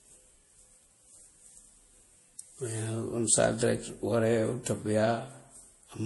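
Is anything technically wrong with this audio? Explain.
Yes. Throughout the speech, nothing is present above 11.5 kHz, and the remaining detail carries two overlapping kinds of smeared, warbling compression artefacts. This is transcoding between lossy codecs, likely a low-bitrate Vorbis encode re-encoded to MP3. Each stage added its own damage, and the lower cut-off remained.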